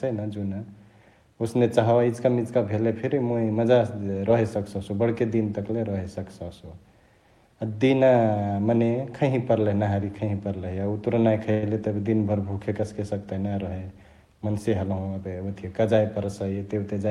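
Packets were likely held up in transit, letting the jitter buffer run dry, which caused a call audio freeze from 11.51 to 11.64 s. The receiver stretched the last sound into a brief fading buzz or hiss for about 112 ms, then resumed where it stopped, losing nothing but adding delay.

Later, the receiver trimmed surplus buffered audio through a jitter buffer speed-up between 14.38 and 15.36 s, cutting repeated pitch-period slices totalling about a tenth of a second. The speech runs at roughly 111% speed with unchanged pitch, sounding briefly hurried.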